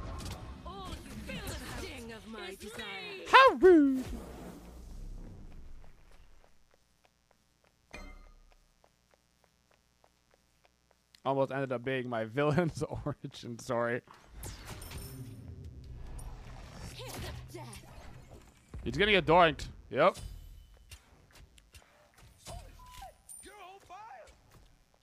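From start to finish, a mains buzz runs underneath the sound, sitting about 40 dB below it. Its fundamental is 60 Hz, and sharp switching spikes arrive twice per cycle, so the interference is a dense stack of harmonics reaching into the kilohertz range. That high harmonic content gives it a raspy, edgy texture. This sets it apart from plain mains hum, which stays a smooth, low tone at 60 or 120 Hz.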